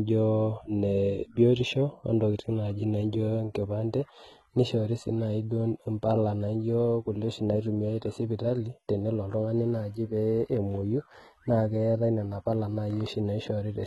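Throughout the speech there is heavy codec damage, likely from HE-AAC compression at a rate that fits roughly 16 kbps. Nothing sits above 11.8 kHz. Unlike a plain low-pass, the treble below that is rebuilt from copied lower bands, so harmonics misalign and s sounds turn gritty, metallic or lispy.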